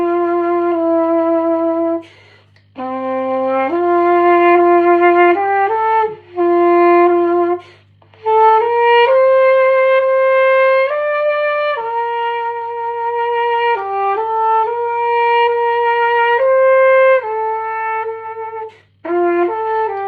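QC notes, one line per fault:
11.79–14.08 s, scattered short gaps: around fifteen tiny losses, none much over 15 ms, filled by continuing prior sound; brief ticks show as small waveform discontinuities and smeared spectrogram columns.
14.18–15.68 s, jitter buffer slow-down: repeated pitch periods add 118 ms, playing at 92% speed with pitch unchanged; spectrogram shows stretched, repeated periodic patterns, sounding drawn out.
17.79–19.04 s, jitter buffer speed-up: around 150 ms of pitch periods removed, playing at 110% speed; waveform shows fewer cycles and spectrogram slightly compressed events, sounding hurried.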